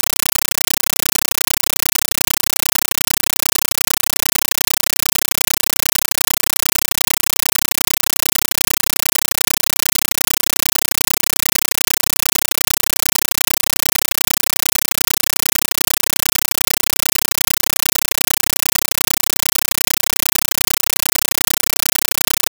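Loud chattering static runs the whole way through: a compressed stream played as audio, with 9.33 ms noise bursts repeating 31.25 times a second, which fits an undecoded AC-3 stream.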